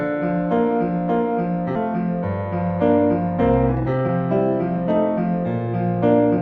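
At 1.75 to 1.77 s there is a skip ahead: roughly a second of audio was discarded while later audio was already queued, so the receive delay shrank by about that much in one step. Nothing fills the gap. Playback jumps straight from one side of the missing stretch to the other, and the two ends are spliced almost directly with no silence between them. Later, from 3.72 to 4.09 s, a jitter buffer speed-up occurs: the buffer was holding more audio than its target, so the receiver repeatedly cut out short slices of one or a few pitch periods, removing about a fifth of a second in total. Over that span the sound plays at about 166% of normal speed while keeping its pitch, so it comes across as rushed and compressed in time.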